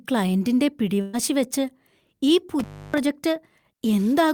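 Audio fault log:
1.01–1.15 s, burst of packet loss: roughly 120 ms of consecutive packets never arrived in time, so the receiver stretched the last fragment of speech and let it fade over the gap. The result is a brief held, dimming sound, after which speech resumes with that stretch missing.
2.59–2.98 s, intermittent contact: a loose plug or cable broke the signal path for about 300 ms. The speech drops out abruptly with crackle at both edges, and faint hiss remains while the connection is open before the sound snaps back.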